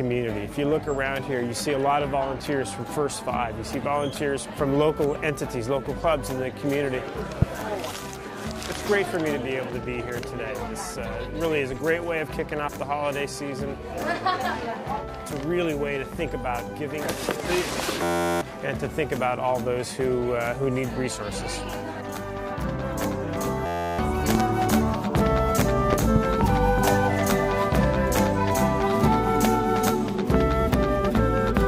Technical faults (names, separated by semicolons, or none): loud pop; system hang loop